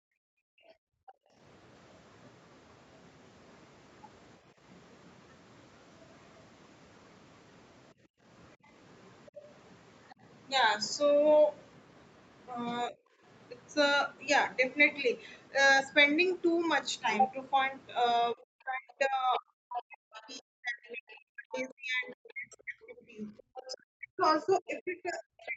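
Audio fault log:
0.00–1.38 s and 7.94–8.24 s, background gated by the echo canceller: the room sound drops away by about 40 dB, then about 38 dB, as the canceller clamps the mic while the loudspeaker plays.
9.26–10.14 s, 19.34–22.13 s and 23.55–25.56 s, other side's voice leaking through: a faint second voice sneaks in, rising from roughly 25 dB to roughly 15 dB under the talker, likely echo the canceller missed.
12.89–12.96 s and 18.34–25.56 s, speech suppressed in double talk: a brief, shallow dip, then a long stretch where the talker is pushed down hard, likely the canceller ducking both sides during overlap.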